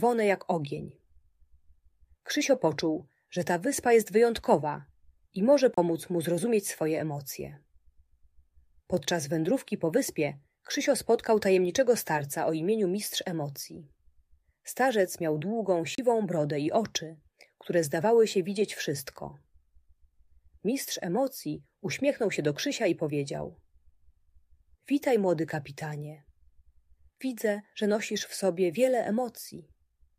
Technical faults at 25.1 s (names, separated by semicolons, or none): none